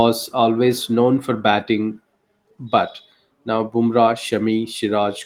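No faults found in the speech; the Opus voice compression leaves only light coding traces, consistent with a fullband hybrid setting around 24 kbps.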